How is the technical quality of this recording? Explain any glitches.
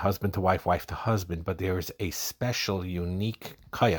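No technical faults or glitches can be heard anywhere.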